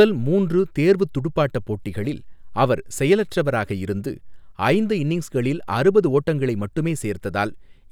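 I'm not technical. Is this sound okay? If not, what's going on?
Yes, nothing in this recording stood out as a problem when I listened to it.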